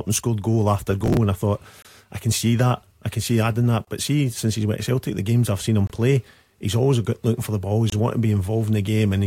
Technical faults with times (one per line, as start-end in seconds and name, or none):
1.01-1.17 processor overload crackle
1.82-1.85 gap between chunks
3.85-3.87 gap between chunks
5.87-5.90 gap between chunks
7.90-7.92 gap between chunks